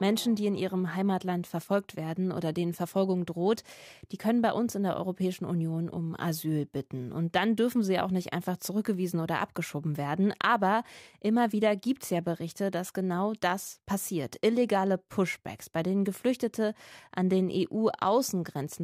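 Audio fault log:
No faults found in this recording.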